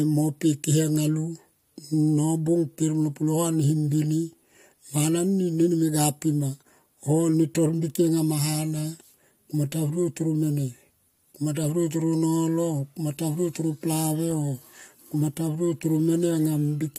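No technical faults are audible.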